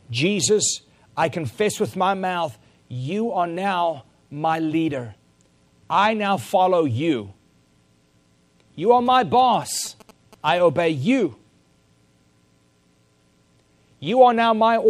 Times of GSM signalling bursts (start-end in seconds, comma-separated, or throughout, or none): 9.06-10.58